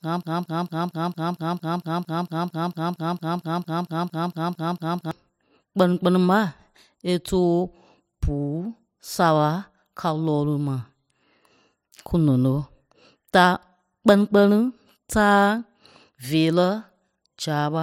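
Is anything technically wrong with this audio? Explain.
Yes. A broken-record loop runs from 0 to 5.11 s. A 0.23 s fragment repeats 21 times back to back, likely from a stalled stream. The speech for that span is lost.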